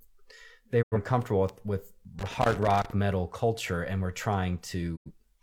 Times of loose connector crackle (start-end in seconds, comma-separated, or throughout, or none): 2.19-2.90